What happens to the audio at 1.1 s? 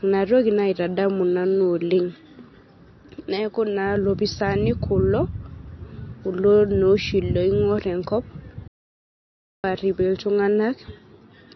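At 1.1 s you're hearing the same damage that runs through the whole speech clip, likely MP3 compression. Weak detail flickers in and out between frames, giving a watery, swirly edge, which points to a very low bitrate, around 33 kbps.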